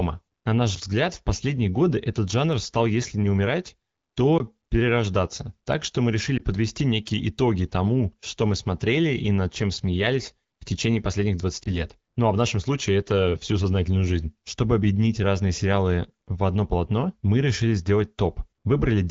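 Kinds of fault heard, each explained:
Block of digital silence: A 20 ms stretch of samples drops to silence at 4.38 to 4.40 s, typically because the output buffer was not filled in time. With no fade at either edge, the waveform jumps to silence and back. At this length it is heard as a short hole in the speech.
Lost AMR speech frames: Two single lost frames of 20 ms each hit the AMR-WB (HD Voice) stream. The decoder conceals each one by repeating the last good pitch and vocal tract settings at reduced gain. The first falls between "что мы" and "подвести некие итоги тому" at 6.37 to 6.42 s. The second follows "смеялись в течение последних" at 11.63 to 11.80 s. Each is heard as a brief dip or warble in the voice.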